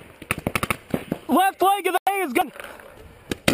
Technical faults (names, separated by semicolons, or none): corrupt frame muted; dropped buffer (overrun)